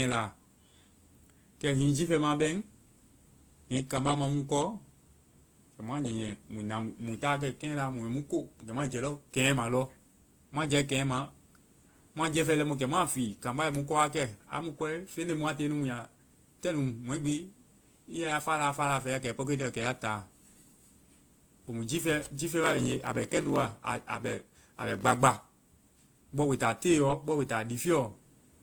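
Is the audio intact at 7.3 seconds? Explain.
No, not really. At 7.3 seconds the speech carries the same damage heard across the whole clip, which likely comes from transcoding between lossy codecs. The artefacts sound like a mid-rate WMA-style encode followed by a much leaner Opus pass at roughly 24 kbit/s. The second codec wastes bits re-coding the first one's artefacts and adds its own, so the two kinds of grit blend together. There's also nothing above about 20.1 kHz.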